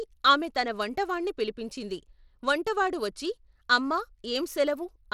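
From start to finish the speech carries a gritty, grainy edge, and the top end flickers instead of sitting steady, with nothing at all above 17.3 kHz. This is plainly audible Bluetooth SBC compression, likely at a starved bit budget that fits roughly 96 kbps. SBC splits the signal into a few wide bands and allocates bits crudely, so the weak high bands lose their bits and the remainder is quantised coarsely, leaving that grit and aliasing behind.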